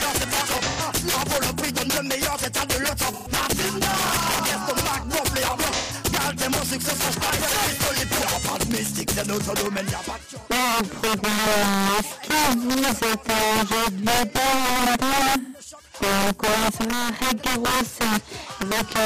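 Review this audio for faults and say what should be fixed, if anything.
Integer overflow runs through the whole clip. Loud peaks, driven about 9 dB past full scale and affecting a small percentage of samples, wrap to the opposite sign instead of limiting. They are heard as violent cracks, seen as full-range vertical flips on the waveform and broadband streaks on a spectrogram. Use saturating arithmetic or a limiter before conversion.

AAC frame loss with concealment occurs at 0.63–0.80 s, 3.06–3.28 s, 5.73–5.93 s and 15.41–15.58 s. Each loss, about 85 ms for the first and 128 ms for the others, fits two or three missing frames. The decoder fills these gaps from the last good spectrum, giving smeared, phasey patches that show as blurred, flattened bands on a spectrogram. Add error protection or retransmission on the transport.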